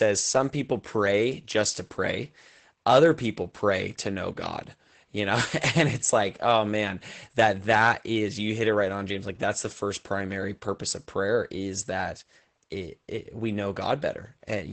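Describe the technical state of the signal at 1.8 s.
At 1.8 s the speech carries Opus voice compression, present across the whole clip rather than at this moment alone. The codec is in its SILK linear-prediction mode at wideband, so nothing reaches above 8.8 kHz, and the excitation is coded coarsely, which fits a bitrate around 12 kbps. The damage is plainly audible: the speech sounds muffled, hoarse and faintly robotic.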